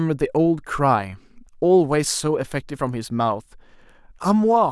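Speech recording, no technical faults detected anywhere in the clip.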